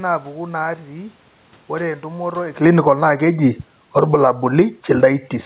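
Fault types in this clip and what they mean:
Automatic gain falling: at 2.50 to 3.09 s and again at 3.82 to 4.32 s, the gain control judges the input too loud and pulls its gain down by about 13 dB, then about 8 dB. The speech and the room noise sink together over roughly half a second.
Automatic gain rising: at 2.99 to 3.62 s and 4.23 to 5.42 s, the control judges the input too quiet and raises gain by about 10 dB, then about 6 dB, winning back only part of the preceding drops. Speech and room noise swell together, the last rise stretching over 1.2 s.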